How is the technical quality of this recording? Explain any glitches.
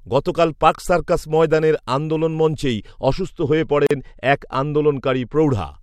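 The recording has two audible faults, both in its second half.

De-emphasis applied wrongly, 3.01 to 5.35 s: an unneeded treble cut slopes the response down, about 11 dB lower at 10 kHz than at 1 kHz, so the speech turns dull and muffled.

Gap at a join of encoded pieces, 3.87 to 3.91 s: separately encoded segments were joined without trimming encoder delay and padding, leaving a 40 ms hole with smeared edges before the speech resumes.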